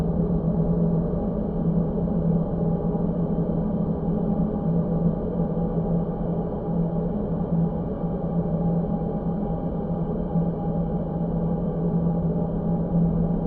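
A recording of everyday sounds, and nothing technically wrong turns up anywhere in it.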